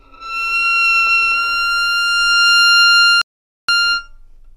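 At 3.2 s the player exhausted its downloaded audio and halted, a rebuffering stall, waiting until more data arrived. The sound drops abruptly to silence for 470 ms, then picks up at 3.7 s exactly where it left off, with nothing missing but extra time inserted.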